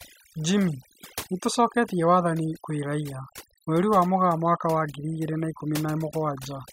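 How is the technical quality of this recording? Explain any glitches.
Overdone noise removal runs through the whole speech clip. The gaps between phrases drop to near silence scattered with twinkling specks. A noise reducer set too aggressively is pulling individual frequency bands down or out wherever they sit close to its noise estimate, and it takes the quieter parts of the voice with them.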